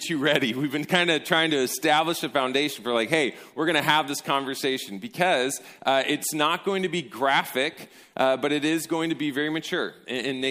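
Nothing in this audio stood out as a technical fault on listening.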